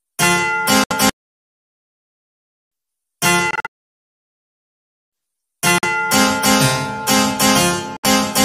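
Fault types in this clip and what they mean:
Bluetooth dropout: The sound cuts to silence four times, at 0.84 to 0.93 s, 3.51 to 3.67 s, 5.78 to 5.85 s and 7.97 to 8.05 s. The likely cause is packets failing to reach the headphones in time. The first, third and fourth gaps last about 70 ms, 46 ms and 70 ms. The second is a cluster of short holes totalling about 186 ms over 279 ms, the longest 46 ms. Each time the sound resumes further along, as though it kept playing.
bit error spike: A single sharp tick is heard at 6.12 s. One sample jumps to a wrong value and snaps straight back. That points to one flipped bit in memory or on a digital link. The error moves the value by a power of two. The click is broadband and bears no relation to the surrounding sound. It passes in an instant.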